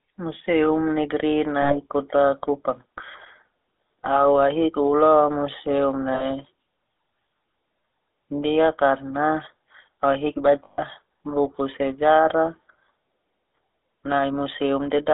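The whole clip has a buzzy, gravelly roughness and a narrow telephone band of roughly 300 Hz to 3.6 kHz. The sound points to the GSM full-rate codec at 13 kbps, which rebuilds the speech from a vocal-tract model driven by coarse, regularly spaced pulses.

At 1.62 to 1.75 s, 6.14 to 6.28 s and 10.64 to 10.82 s, the sound briefly freezes into a rough, metallic ring. These are lost GSM frames. The decoder fills each gap by repeating the last good frame, for about 80 ms, 60 ms and 140 ms.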